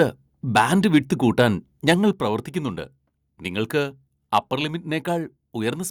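Microphone overload appears in this speech at 0.0–0.03 s, 0.56–0.98 s, 1.39–1.45 s, 1.88–1.93 s and 4.34–4.38 s, with peaks flattened and a harsh crackle. The likely cause is input gain set too high, driving the converter about 2 to 5 dB past full scale and shaving a small share of samples. Microphone volume stepped down at 2.13 s and 4.38 s, where the level of both the speech and the background drops abruptly, by about 6 dB and then about 2 dB, each just after a clipped peak. This is likely the call software detecting overload and cutting the device's input volume in a single step.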